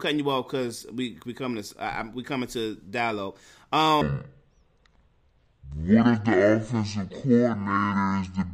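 At 4.01 s the speech suddenly drops into a section at the wrong speed, and it stays that way right to the end at 8.53 s. Playback runs at about 0.54 times the original rate, so everything drags and the pitch sinks by roughly ten semitones, turning the voice deep and sluggish as it moves into "offensive coordinator in the". It's likely that this stretch was played back or resampled against the wrong clock.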